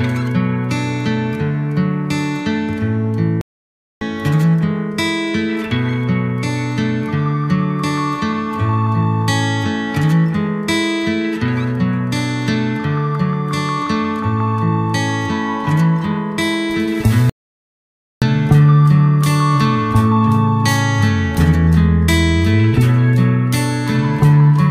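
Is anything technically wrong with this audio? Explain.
Yes, there are two playback stalls. The first runs from 3.41 to 4.01 s, about 0.6 s; the second runs from 17.30 to 18.22 s, about 0.92 s. Each time the sound cuts off mid-flow and drops to silence, then continues. The likely cause is that the player ran out of data or its thread was blocked, leaving nothing to output until it recovered.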